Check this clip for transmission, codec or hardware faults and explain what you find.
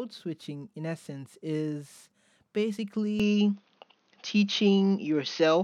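One fault, from 3.2 s to the end: the input likely switched to a poorer device. There's no gap, but the speech suddenly loses everything above 6.5 kHz, shifts a few dB in level and gains a faint new noise floor, so it turns dull and boxy.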